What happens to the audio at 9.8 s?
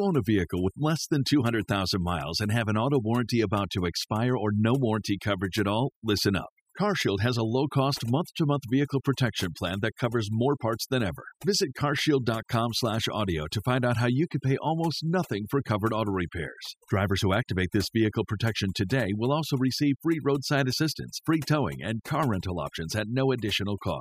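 At 9.8 s you're hearing overdone noise removal, and it isn't a one-off: it runs through the whole clip, so that moment is just a sample of it. The noise reduction was pushed too hard on a noisy recording, so any frequency band sitting near its noise estimate gets pulled way down or shut off, taking the quieter bits of speech along with it. The background sinks and breaks up into twinkling, warbling specks.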